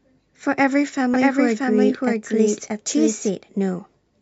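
From 1.14 s to 3.30 s the speech is heard twice: a second, equally loud copy trails about 0.7 s behind, dry and full-band, cutting in and out abruptly. This doubled audio track likely comes from a slower second capture path mixed in.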